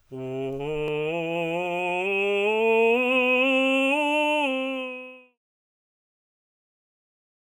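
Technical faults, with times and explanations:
Nothing wrong turns up in this bit of music, and the smooth fade out that eases down from around 4 s to 5.39 s is just a deliberate, editor-style ending.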